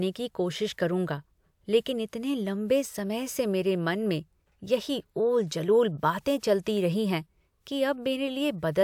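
No dropouts, distortion, timing glitches or other technical faults can be heard anywhere in this recording of speech.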